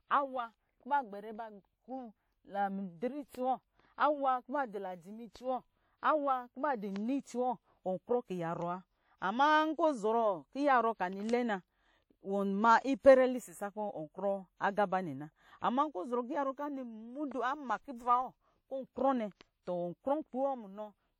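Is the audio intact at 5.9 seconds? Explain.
No. At 5.9 seconds the speech carries WMA compression damage that runs through the entire clip, likely from a Windows Media Audio encode at a low rate, around 48 kbps. The transform codec smears its quantisation error across long blocks of tens of milliseconds and zeroes weaker spectral detail, and nothing survives above 17.8 kHz. The result is plainly audible: a ringing, washy quality and a hiss that swells and fades with the speech.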